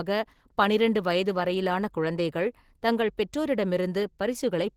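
This speech clip carries Opus voice compression from start to finish. The SILK layer codes the band below 8 kHz, and a sparse CELT layer fills above it, which fits roughly 16 kbps. That gives a plainly hoarse, slightly robotic quality. A spectrogram would show patchy, smeared energy above 8 kHz in 20 ms blocks.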